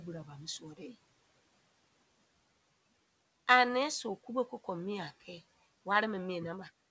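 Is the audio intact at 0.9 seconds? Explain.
No. From 0.6 to 0.95 s there is speech cut by the noise suppressor: it mistook parts of the speech for background and pulled them down by up to about 13 dB, about a tenth of a second in total, leaving those sounds faint and swallowed.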